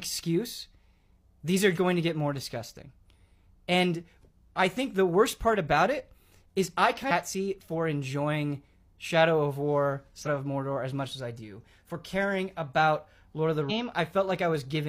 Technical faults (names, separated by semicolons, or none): damaged data in a compressed stream